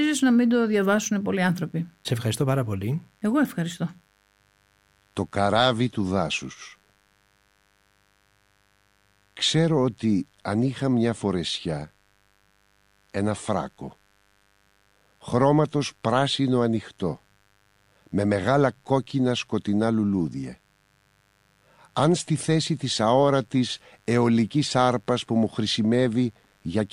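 A mains buzz runs through the speech from start to finish. It is a steady, raspy tone sitting roughly 40 dB below the voice. The buzz is built on 50 Hz mains. Sharp switching spikes get into the signal twice per cycle, so the energy repeats at 100 Hz. Those spikes carry harmonics of 50 Hz well up into the kilohertz range. That is why it rasps rather than hums. A dimmer, rectifier or unshielded cable is the source.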